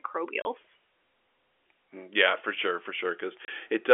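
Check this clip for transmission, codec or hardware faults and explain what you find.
Two short dropouts break up the speech, both from packet loss filled with silence. Each gap lasts 30 ms, from 0.42 to 0.45 s and from 3.45 to 3.48 s, which points to a single missing 30 ms packet each time. The receiver had nothing to play for those intervals and inserted digital silence. The signal stops and restarts abruptly, so each hole has hard edges. The speech runs through the G.711 telephone coding at its usual narrow telephone bandwidth.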